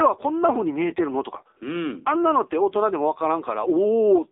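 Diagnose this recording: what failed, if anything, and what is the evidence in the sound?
Codec stage, AMR narrowband mobile codec throughout: speech limited to 300 Hz to 3.7 kHz, heavily buzzy and synthetic from sparse pulse excitation, fitting a 6.7 kbps mode.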